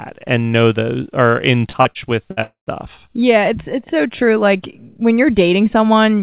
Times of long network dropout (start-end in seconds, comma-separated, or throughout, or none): 2.43-2.70